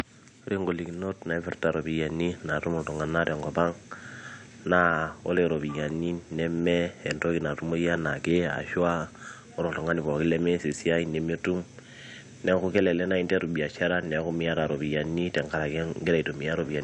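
Nothing stood out on listening to this speech, with only the room's own background noise sitting about 37 dB below the voice.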